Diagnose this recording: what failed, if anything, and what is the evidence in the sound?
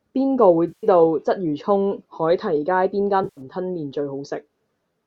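The failure is AAC frame loss with concealment, at the network and codec stage. The speech breaks up twice, from 0.68 to 0.87 s and from 3.24 to 3.41 s. Each gap is a smeared, noisy, phasey patch lasting about 150 ms and 130 ms. The decoder lost a run of frames and rebuilt them from the last good spectrum. The gap lengths fit runs of roughly 10 ms frames, as used by a likely low-delay AAC link.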